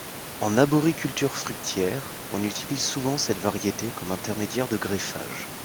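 Nothing in the speech points to a technical problem, just some room noise sitting about 13 dB beneath it, which comes from the space the microphone was in rather than from the system.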